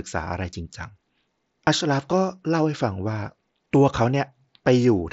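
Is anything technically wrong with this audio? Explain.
Yes. At 1.67 s and 3.65 s there is a faint, nearly hidden hiccup lasting 7.5 ms. This is concealed Bluetooth headset packet loss: a gap the length of one packet on the mSBC link was filled by repeating the best-matching stretch of the preceding waveform.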